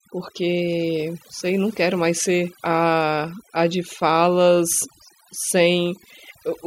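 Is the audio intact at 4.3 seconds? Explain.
No. At 4.3 seconds, as throughout the clip, the speech shows overdone noise removal. A noise reduction stage set far too aggressively is cutting individual frequency bands down or out whenever they sit close to its noise estimate, and the quieter parts of the voice get removed along with the noise. The result is a background that drops and breaks up into twinkling, chirpy specks.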